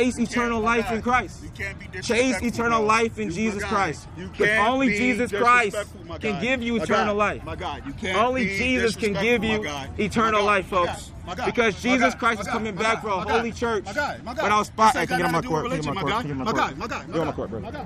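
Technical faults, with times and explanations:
No technical faults can be heard anywhere.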